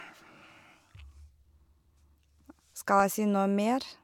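At 3.0 s a single sharp click cuts through the speech. It is the mark of dropped samples, likely a fraction of a millisecond missing from the stream. The waveform jumps abruptly to a later value, and the spectrogram shows a thin vertical line spanning all frequencies.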